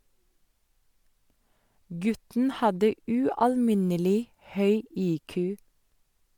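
A speech recording, and nothing is technically wrong with it.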